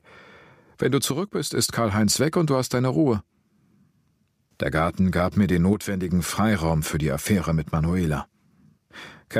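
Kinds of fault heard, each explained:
One channel drops out: from 1.11 to 1.57 s and again from 5.73 to 6.09 s, the speech abruptly falls by about 6 dB, holds that lower level for roughly half a second and a third of a second, then snaps back to full level. The likely cause is that one side of a stereo recording went silent for those stretches, so when both sides are summed to mono, the sound they share arrives at half strength.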